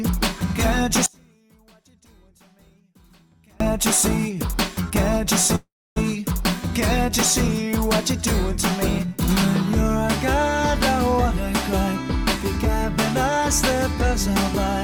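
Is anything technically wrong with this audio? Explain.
Yes. There are two faults.

From 1.06 to 3.60 s there is an audio dropout to a faint residue. The sound cuts off abruptly, and about 2.5 s of it is lost. The gap is not silent. A faint trace of the sound remains, roughly 35 dB down. The likely cause is a break in the wanted signal while the path after it stayed live. The sound then returns just as suddenly, with no fade.

From 5.55 to 5.98 s there is a call audio freeze. The last sound is stretched into a brief decaying buzz or hiss. About 270 ms of silence follows. The audio then resumes exactly where it stopped, so nothing is missing. Instead, about 0.41 s of delay has been inserted. This likely comes from packets being held up in transit until the jitter buffer ran dry.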